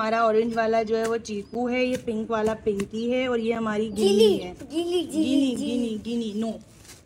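Brief dropouts, each about 7 ms of silence, cut into the audio at 1.54, 3.55 and 5.56 s, evenly spaced roughly 2 s apart. This is a gap between chunks: the audio arrives in 2-second blocks, and silence is inserted at each join.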